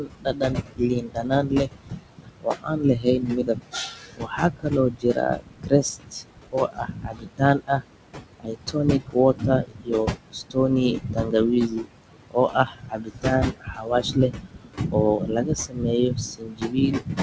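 The noise suppressor works throughout, pulling the steady room noise down by about 21 dB. That leaves a residue pumping between phrases. The same suppressor also cuts into the speech itself, treating soft consonants and word tails as noise. From the start to 10.57 s, roughly seven seconds of it sound swallowed, with drops of about 22 dB. Shorter dips follow at 10.92–11.34 s (about 19 dB) and 11.68–11.86 s (about 13 dB). The effect returns from 12.19 s to the end, again about 22 dB down.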